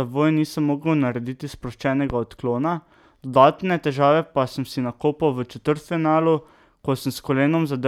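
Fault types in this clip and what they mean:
Loud pop: a single sharp pop lands at about 2.10 s, lasting roughly 30 ms, right after "nisem mogel narediti" and before "odklona dodatne težave pa", peaking at roughly 10 dB above the speech. It is likely a brief voltage step or pulse, from a plug, switch, static discharge or driver glitch, added onto the signal, so the speech continues unbroken beneath it. Unlike a dropout or clipping, nothing is removed or flattened. An impulse is simply laid on top.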